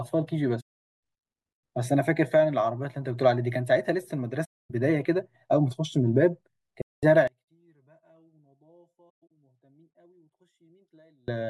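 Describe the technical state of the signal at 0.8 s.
At 0.8 s the speech sits inside an AAC frame loss with muting, running from 0.60 to 0.81 s: a run of frames went missing, the decoder zeroed them, and overlapping windows fade sound into a soft-edged silent gap.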